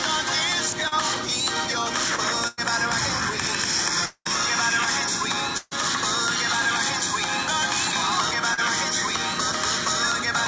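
At 0.88 to 0.94 s there is a short concealed packet loss. About 40 ms of audio never arrived in time. The receiver filled the hole by extending the last sound, then blended back into the real signal. It comes across as a brief smear or wobble. The same fault returns at 8.54 to 8.59 s, again about 40 ms, with the same quick smudge.

A burst of packet loss follows at 2.48 to 2.59 s. Here about 100 ms went missing in a row. The receiver stretched the preceding sound and let it fade, so the gap becomes a held buzz or fading hiss. The audio then picks up further on, with that stretch gone. A second burst runs from 5.57 to 5.74 s. It is longer, about 140 ms, and includes a very brief drop to near silence before the signal resumes.

From 4.05 to 4.27 s the sound is cut off for about 200 ms. The last sound is drawn out and dies away, then about 60 ms of silence sits before the audio returns. The part in between is simply absent. 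The likely cause is a long network dropout, where nothing reached the receiver for that stretch. Throughout, nothing is heard above 8 kHz, which fits a wideband call codec such as G.722.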